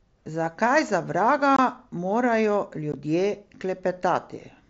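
Unconcealed Bluetooth headset packet loss cuts the speech twice: from 1.56 to 1.59 s, just after "za vraga", and at 2.92 s, after "za vraga morajo". The gaps, roughly 22 and 15 ms, fit a few dropped mSBC frames left as silence, producing abrupt edges.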